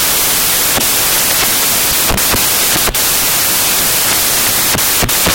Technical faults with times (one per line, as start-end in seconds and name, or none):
0.00-5.34 samples built from the wrong bytes